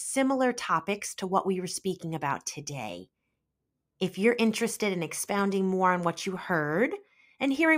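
At 5.39 to 5.42 s there's a single loud pop cutting through the speech. It's a short, sharp hit, peaking a few dB above the level of the talking, and the speech carries straight on underneath without a break. That sound is typical of a sudden voltage step or spike riding on the signal, likely from a plug being seated, a switch flipping or a static discharge, which the downstream circuitry then shapes into that quick click-thump.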